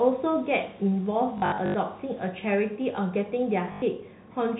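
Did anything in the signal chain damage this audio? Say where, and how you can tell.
Yes, at the network stage: packet loss with last packet repeated. From 1.38 to 1.74 s a robotic stutter breaks in, with runs up to 80 ms. A shorter burst sits at 3.72 to 3.82 s. The receiver replayed stale audio. The buzz fits 20 ms packets.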